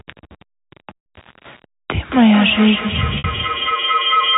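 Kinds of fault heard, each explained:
Low bit depth without dither: A grainy, gritty distortion rides on the sound throughout and changes with it, sitting about 30 dB below the signal. The likely cause is coarse rounding to about 6 bits. Unlike steady hiss, this error follows the signal's level and shape.
Packet loss with pitch repetition: Around 0.96 s a 100 ms gap and around 3.18 s a 60 ms gap are bridged by repeating the last pitch period. This gives a briefly held, buzzy tone that fades into silence before the speech returns with a short cross-fade.
Feedback howl: From 2.11 s to the end, a tone near 1.5 kHz builds as the sound loops between microphone and loudspeaker. Its loop repeats roughly every 200 ms, and the howl peaks about 4 dB below the speech. Unlike ordinary echo, the repeats grow instead of dying away.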